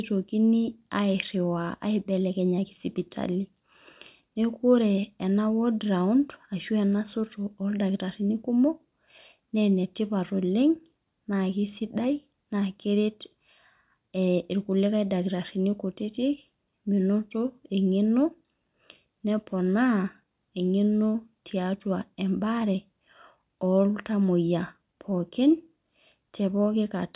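No technical faults can be heard anywhere in the recording.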